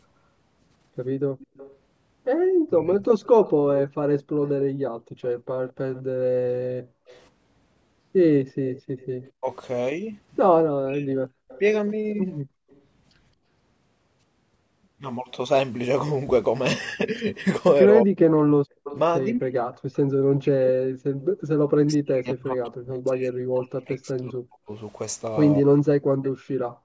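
Speech runs through a call path with three kinds of echo-canceller trouble. The echo leak is a faint delayed copy of the far-end voice, likely from a speakerphone whose canceller missed part of the pickup. It appears from 1.38 to 12.81 s about 25 dB down at a 219 ms lag, from 18.84 to 21.25 s louder at about 15 dB down and 228 ms, and briefly at 26.23 s at 232 ms. The steady lag near 220 to 230 ms separates it from room reverberation, which has no distinct repeat. Speech suppressed in double talk is the near talker being turned down while the far end also speaks, likely because the canceller could not separate the two. It hits 2.71 to 3.04 s (about 15 dB), 9.4 to 11.25 s and 18.04 to 25.88 s (up to about 40 dB). Because the dips follow overlapping talk rather than arriving at random, they are not network dropouts. Background gated by the echo canceller pulls the room sound down hard, about 35 to 40 dB, at 4.26 to 7.1 s, 12.43 to 12.7 s, 18.56 to 18.84 s and from 26.16 s to the end. 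It mutes the ambience itself rather than the voice, which distinguishes it from double-talk suppression.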